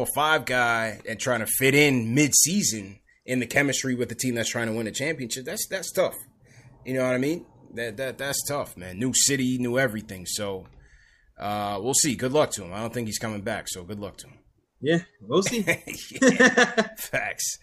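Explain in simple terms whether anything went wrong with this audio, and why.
Nothing went wrong here.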